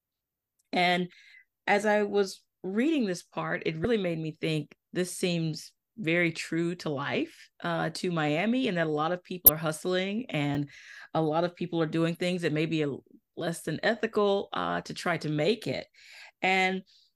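At 1.10, 3.82 and 9.46 s, just before "as I was reading" and between "that a lot of" and "are hustling", damaged data in the compressed stream makes the decoder misread frames and lose sync for about 34 ms each, giving brief glitches that show as smeared broadband smudges and ragged waveform bursts. At 10.55 s, between "are hustling" and "a lot of people", a block of digital silence about 4 ms long zeroes the samples abruptly, heard as a tick: a flat-line gap in the waveform.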